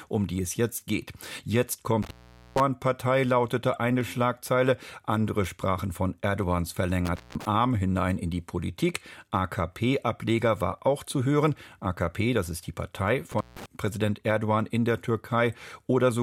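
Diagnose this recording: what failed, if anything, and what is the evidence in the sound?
Single sharp clicks at 0.79, 4.01, 6.43, 9.58, 10.79 and 11.72 s are likely dropped samples at the driver or buffer stage. Well under a millisecond goes missing each time, so the waveform steps abruptly and the spectrogram shows a thin vertical line.

An intermittent contact in the analogue wiring cuts the sound out from 2.02 to 2.60 s, 7.05 to 7.45 s and 13.31 to 13.66 s, with crackle at each edge. While the connection is open, the waveform collapses to faint hiss, and the spectrogram shows broadband crackle bracketing a near-empty gap.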